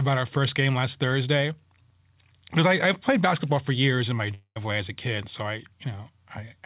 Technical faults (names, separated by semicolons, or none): long network dropout